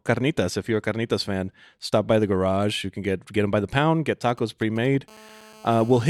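From 4.29 to 5.10 s, GSM signalling bursts from a nearby 2G phone, rectified by the audio circuitry, gallop as dit-dit-dit ticks and brief 217 Hz buzzes, unlike continuous hum. From 5.11 to 6.05 s, this becomes GSM phone buzz, a steady, raspy, harmonic-rich 217 Hz drone about 25 dB below the speech, matching an active call rather than intermittent signalling.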